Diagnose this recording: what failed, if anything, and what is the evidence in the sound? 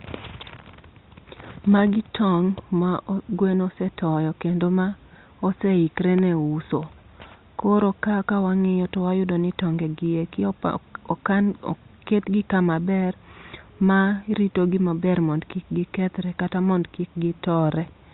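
Nothing failed; no faults heard.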